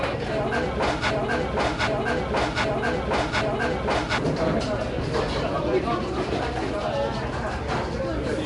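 A recording of everyday sound, carrying a rough, hissy haze and a smeared, watery texture throughout, with nothing above 10.6 kHz. This is plainly audible codec damage, likely from Nellymoser compression, which codes short fixed blocks at a low bit budget, fills starved bands with noise, and here points to a bitrate around 44 kbps. From 1.11 to 4.18 s there is a broken-record loop: a 0.77 s fragment repeats exactly four times back to back, likely because the stream stalled and kept resending its last buffer, so the audio that belonged in that span is lost.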